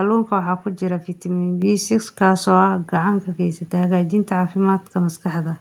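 A speech recording with a microphone volume stepped up fault at 1.62 s. The level jumps by about 6 dB in a single step. Voice and background noise rise together. The call software judged the microphone too quiet and raised its input volume.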